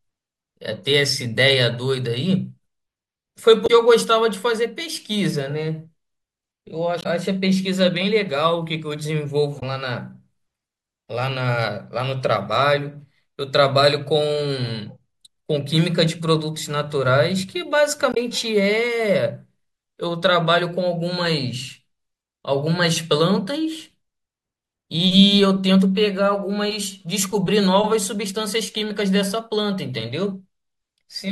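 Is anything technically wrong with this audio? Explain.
Yes. The speech contains four short disruptions caused by damaged data in a compressed stream, at 3.64–3.70 s, 7.00–7.06 s, 9.57–9.63 s and 18.11–18.17 s, each about 64 ms long. Corrupted bytes in the encoded file make the decoder misread those frames and lose sync until it finds the next valid frame header. Each event is heard as a brief chirp, squawk, click or short hole that breaks into the speech.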